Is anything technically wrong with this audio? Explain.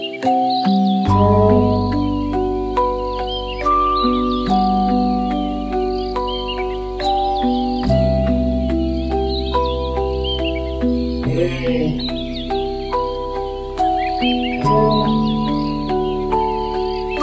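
No, there's nothing technically wrong.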